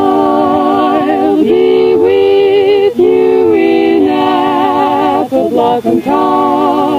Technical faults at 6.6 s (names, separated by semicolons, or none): gain pumping